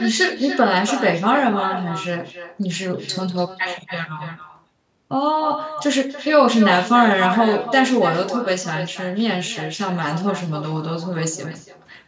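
From start to finish the speech carries an echo with no canceller: the far end's loudspeaker output reaches its microphone and returns unremoved, so every phrase is shadowed by a copy about 10 dB quieter, arriving roughly a third of a second later. A spectrogram shows each syllable's pattern repeated faintly to its right, and the waveform shows smeared tails filling the pauses.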